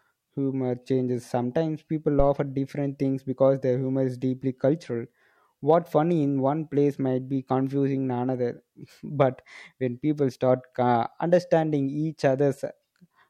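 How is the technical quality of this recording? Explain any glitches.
One fault stands out: a phantom power thump at 2.20 s, running to about 2.29 s. A supply feeding the live microphone input was switched, and the sudden voltage step passed through the input's coupling capacitors as a single low-frequency pulse. It comes through as a deep thump peaking at about -12 dBFS, and it dies away within roughly 21 ms, so it registers as a short knock rather than a lingering boom.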